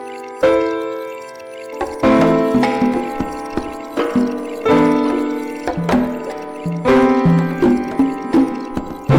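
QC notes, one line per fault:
Throughout: hard clipping. The music was driven about 11 dB past what a stage could pass, so its peaks were sliced flat, around four percent of samples. Those flat tops add high harmonics, giving a harsh fuzz on every loud sound.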